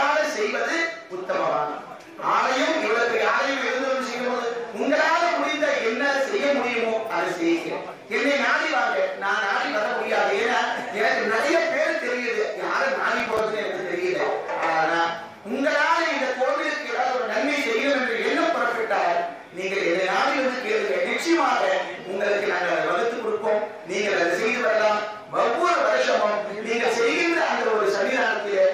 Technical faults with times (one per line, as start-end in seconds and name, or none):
13.20-13.39 processor overload crackle